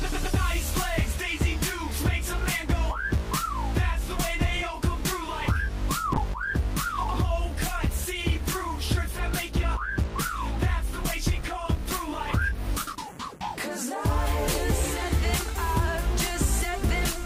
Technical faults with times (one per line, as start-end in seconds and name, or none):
6.15-13.37 call bitrate drop